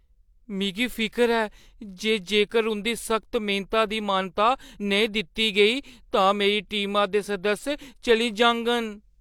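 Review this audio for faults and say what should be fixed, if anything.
Nothing to fix here, as no faults are audible anywhere in this speech.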